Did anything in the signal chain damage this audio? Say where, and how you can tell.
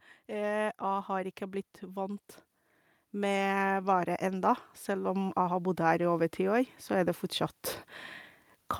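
Yes. The damage comes from the call-processing stage, where automatic gain rising sets in twice. From 0.26 to 2.31 s the level climbs by about 4 dB. From 3.11 to 7.24 s it climbs again, by about 9 dB. The speech and the background noise swell together, slowly and smoothly. That points to a gain control judging the input too quiet and ramping its gain up over seconds, not to anything at the source.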